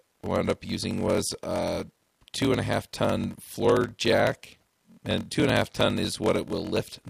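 A low buzz at 41.7 Hz runs through the whole speech, which also plays slow at 0.889 times normal speed with timbre unchanged. This is a block size mismatch (padded): blocks, which fit 1024 written samples, are read into larger ones, and the zero-filled remainder leaves a short gap every cycle.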